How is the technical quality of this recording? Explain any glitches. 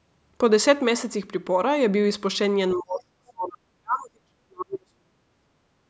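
The recording has one clear glitch, in the second half of the speech, from 2.75 s to 5.47 s. This is speech suppressed in double talk. The echo canceller most likely could not tell the near talker apart from loudspeaker echo while both sides spoke at once, so it turned the near signal down. The voice dips sharply in level, at its deepest by roughly 40 dB, and is held down for about three seconds. The audio's top end stops near 8 kHz, as the call path allows.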